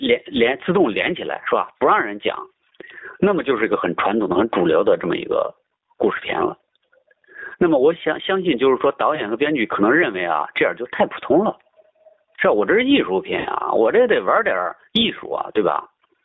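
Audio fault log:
Throughout: gain pumping. The level swings by around 25 dB, leaving loud and quiet parts squashed together. The likely cause is input gain set far too high, with a fast limiter clamping down repeatedly.
Throughout: G.729 codec. The band runs only from about 150 Hz to 3.7 kHz, and the speech has a rough, slightly synthetic texture with plainly audible damage. This fits G.729A at 8 kbit/s, which rebuilds each 10 ms frame from a vocal-tract filter, pitch predictor and sparse pulses.
9.15 to 9.23 s and 13.39 to 13.48 s: VoIP packet loss concealed by the speech codec. The decoder stretched the last pitch and filter to cover the gap, fading as it went, 20 ms of missing audio at the first gap and 60 ms at the second, which fits one and three lost packets. Because each frame depends on the one before, the speech stays weak and distorted briefly after each gap.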